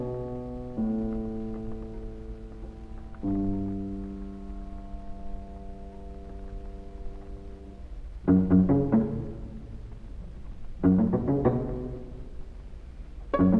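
Nothing goes wrong anywhere in this recording, so there's no technical fault to point to.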